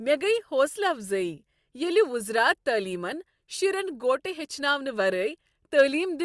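Aliasing runs through the whole speech clip. Energy above 12 kHz folds back to false, unrelated frequencies, which fits a drop from 48 kHz to 24 kHz without filtering. Sibilants turn gritty and metallic, with fold-back around 30 dB below the speech. A spectrogram shows content running hard to 12 kHz.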